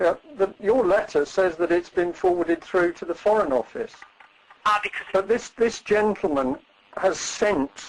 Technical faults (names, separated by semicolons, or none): clock drift between sender and receiver; repeated timing corrections; short stall from a late packet